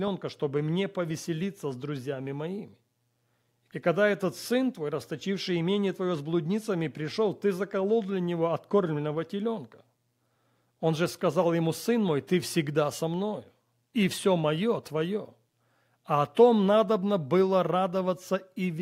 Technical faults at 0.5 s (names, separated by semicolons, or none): none